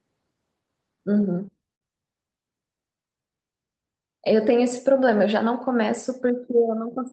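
Repeated stalls (stutter) run from 1.17 to 1.83 s. Packets arrived late, so the jitter buffer emptied five times and the receiver stretched the last sound to cover about 104 ms, the longest hold 57 ms. Nothing is lost, but the speech drags and stutters.

A jitter buffer slow-down follows from 2.95 to 3.31 s. To rebuild its reserve, the receiver repeated single pitch periods, adding 60 ms and playing that stretch at 86% speed. The speech sounds drawn out at unchanged pitch.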